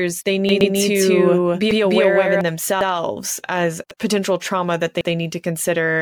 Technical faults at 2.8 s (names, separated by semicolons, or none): overlapping chunks